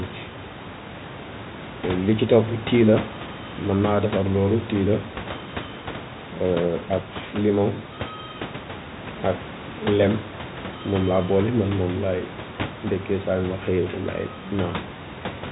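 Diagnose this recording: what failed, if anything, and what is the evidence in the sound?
Nothing in the chain has failed: the speech sits about 15 dB above the room's background noise and carries the expected G.711 telephone band limit at 4 kHz, with no dropouts, distortion or timing disturbances anywhere in the signal.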